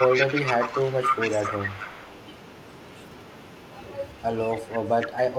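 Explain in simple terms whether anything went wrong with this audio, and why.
Echo leak at 0.00 to 2.18 s, 4.49 to 4.54 s, 4.74 to 4.79 s and 5.00 to 5.08 s: a copy of the speech returns 268 ms late, likely because a speakerphone's echo canceller let it through.

Speech suppressed in double talk at 0.46 to 0.55 s, 4.53 to 4.76 s and 5.10 to 5.34 s: the speech dips or drops out, likely because the canceller turned everything down when both sides overlapped.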